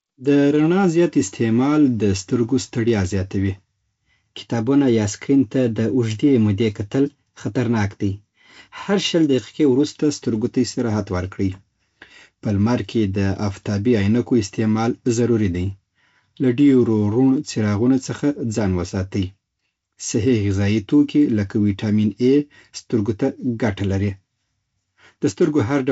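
No technical faults are audible.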